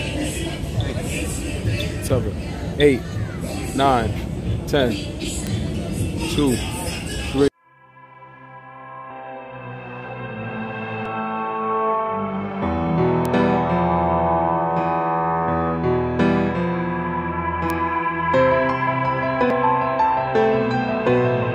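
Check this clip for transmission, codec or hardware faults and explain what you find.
Two kinds of fault turn up: isolated bit error spikes and short bursts of damaged data in a compressed stream.

Bit error spikes occur at 5.47, 13.25 and 17.70 s. Each is a single corrupted sample: one flipped bit throws the value up or down by a power of two, and it snaps back on the next sample. Each is heard as one dry tick with no relation to the surrounding sound. On the waveform it is a lone vertical needle. On a spectrogram it is a thin full-height line.

Damaged data in a compressed stream appears at 5.74, 9.10, 11.06 and 19.50 s, each only a few milliseconds long. Corrupted bytes in the encoded data make the decoder misread the affected frame and lose sync until it finds a valid frame header again. Each is heard as a brief chirp or blip. A spectrogram shows a short smeared patch of odd tonal or noisy energy. 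The waveform shows a small discontinuity there.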